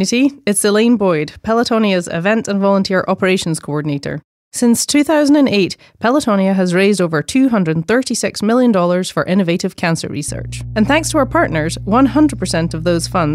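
A speech clip with mains hum entering at 10.28 s, just after "million for innovative cancer", and running to the end at 13.35 s. It is a steady 60 Hz tone, roughly 10 dB below the speech, with low harmonics, from power-line coupling through a ground loop or nearby transformer. A spectrogram shows a flat line at 60 Hz with harmonic lines above; the waveform gains a constant low-frequency ripple.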